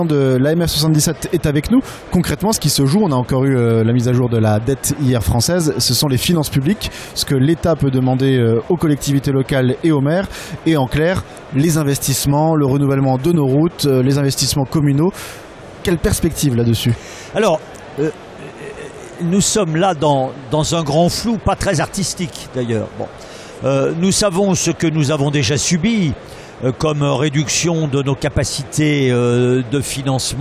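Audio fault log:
No faults are heard in this audio: the signal holds steady in level and timing all the way through, with nothing breaking into it at any point.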